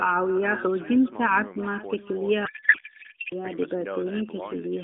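A speech recording carried over narrowband AMR, with the line confined to roughly 250 Hz to 3.6 kHz, has an echo with no canceller running through the whole clip. Each phrase is trailed by a fainter, thinner copy arriving around 0.4 s later, about 19 dB down. The far end's loudspeaker is feeding its microphone, and nothing removes that signal before it returns. On a waveform, every burst of speech has a small ghost envelope about 0.4 s behind it. A spectrogram shows faint duplicated harmonic patterns offset in time. From 2.46 s to 3.33 s a codec payload misread takes over. The speech collapses into garbled warble and noise that barely tracks it, which points to octet-aligned AMR frames being unpacked as if bandwidth-efficient, so the decoder reads bit fields from the wrong positions. Across that span the spectrogram loses its harmonic striations and fills with smeared, unstructured energy inside the band.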